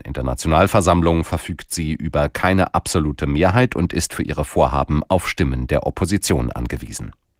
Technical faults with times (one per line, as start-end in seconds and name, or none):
none